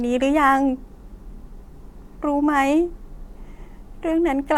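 No audible faults turn up anywhere in this recording.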